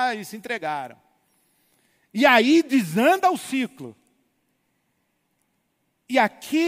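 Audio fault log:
2.23–6.67 s, crude rate conversion: gritty, inharmonic fizz trails loud and bright speech, roughly 40 dB down, fitting unfiltered linear interpolation from 48 kHz to 44.1 kHz.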